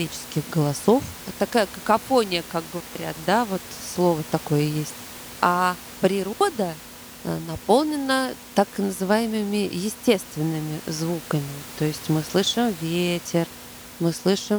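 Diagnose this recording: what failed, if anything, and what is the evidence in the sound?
A digital wireless dropout: the radio link lost too much data and the receiver muted. Between "какофония как" and "да вот слово такое", from 2.80 to 2.95 s, the speech falls to near silence for 150 ms, and again from 6.33 to 6.41 s for 80 ms. Both are clean holes with no noise bursts.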